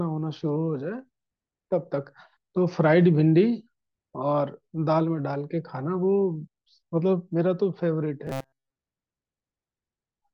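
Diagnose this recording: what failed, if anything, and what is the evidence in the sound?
Robotic sound from repeated short buffers, 8.27 to 8.78 s: the speech turns into a rigid metallic buzz at 134 Hz that loosely follows the words. The likely cause is a driver or buffer stage looping a block of about 7.5 ms through most of the span while fresh audio goes missing.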